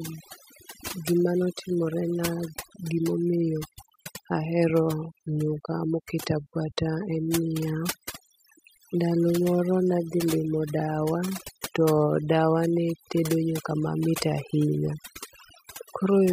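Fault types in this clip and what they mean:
overdone noise removal: a noise reduction process pushed too hard throughout this speech, pulling individual frequency bands down whenever they sit close to its noise estimate. Quiet speech detail disappears along with the noise, leaving near-silent gaps with twinkling specks.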